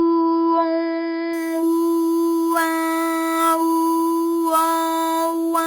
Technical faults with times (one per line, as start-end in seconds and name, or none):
1.33-5.67 imaging from sample-and-hold upsampling